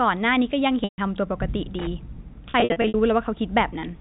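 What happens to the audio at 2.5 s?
At 2.5 s packet loss with pitch repetition begins. Audio packets go missing through to 2.94 s, about 240 ms lost across a 440 ms stretch, which fits roughly a dozen 20 ms packets dropped. The receiver covers each hole by repeating the last pitch period, fading it over about 50 ms. The sound turns briefly held and buzzy in bursts, and the longest 60 ms gap sinks close to silence before the telephone-band speech cross-fades back in.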